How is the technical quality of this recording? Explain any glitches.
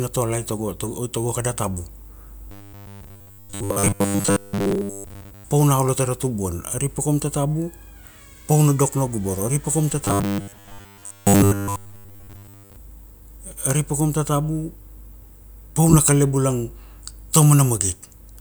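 The recording has two stretches of robotic sound from repeated short buffers. From 2.51 to 5.44 s, just before "pa una olo tara", and from 10.05 to 12.76 s, just after "pa kaum ta", the speech becomes a rigid metallic buzz at 100 Hz that still loosely tracks the words. The likely cause is audio arriving too slowly, so the playback repeats a short buffer, about 10 ms to fit the 100 Hz pitch, in place of most of the real signal.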